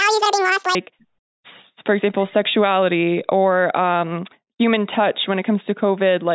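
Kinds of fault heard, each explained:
Wrong sample rate: From the start to about 0.75 s the speech sounds chipmunk-like and rushed, running at twice its natural speed and a full octave (12 semitones) high. Pitch and tempo shift together by the same factor of 2, so the samples were evidently clocked out faster than they were captured, with no rate conversion in between. The doubling fits audio recorded at 8 kHz being played back at 16 kHz.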